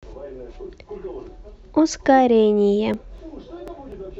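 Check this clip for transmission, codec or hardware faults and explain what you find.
There's one fault here: periodic USB or driver dropouts from 2.94 to 3.92 s. About every 0.25 s, a few milliseconds of speech get skipped, probably because something stalls the bus or driver on a timer. You hear about five evenly spaced ticks.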